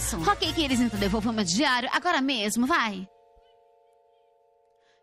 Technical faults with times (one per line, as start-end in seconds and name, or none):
0.00-5.03 clock drift between sender and receiver
0.20-4.39 repeated timing corrections